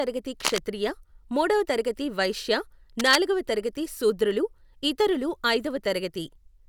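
At 0.40 to 0.59 s and again at 2.99 to 3.16 s, a cable scratch noise sits only a few decibels under the speech: a dense, ragged rustle, likely from a worn lead or connector being moved. Unlike a single click, each burst lasts a fraction of a second.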